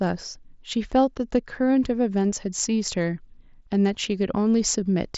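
No technical faults turn up anywhere in the speech; it comes through a wideband Bluetooth headset link whose mSBC coding limits the band to about 8 kHz and adds only a light grain on the louder moments.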